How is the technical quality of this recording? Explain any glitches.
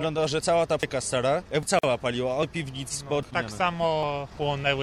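The recording has two kinds of glitch: regular skips and one short dropout.

Audio missing between chunks: at 0.83, 1.63, 2.43, 3.23 and 4.03 s the sound jumps ahead, likely because about a fifth of a second is lost whenever one 1-second chunk closes and the next opens. The waveform shows abrupt splices with no silence.

Gap at a join of encoded pieces: from 1.79 to 1.83 s a 46 ms silence cuts in, left by encoder delay and padding at a join. It appears as a thin blank vertical band on the spectrogram before the sound resumes.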